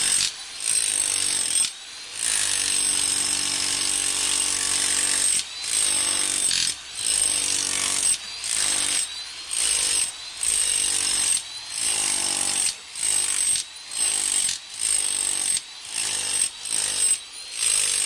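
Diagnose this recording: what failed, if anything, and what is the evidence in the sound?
Crude rate conversion at the sample-rate stage: throughout, an inharmonic gritty fizz about 20 dB below the sound tracks loud, bright events, consistent with unfiltered linear interpolation from 44.1 to 48 kHz.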